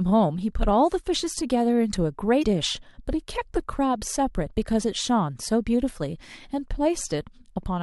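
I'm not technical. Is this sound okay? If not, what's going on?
No. At 2.39 to 2.44 s there is a short burst of damaged data in a compressed stream, lasting about a twentieth of a second. The file this speech was stored in is compressed, meaning it is packed into small blocks that a player unpacks on the fly. Some of that data was corrupted, so the player could not read it properly and briefly lost its place before picking up again. You hear it as a quick chirp or blip.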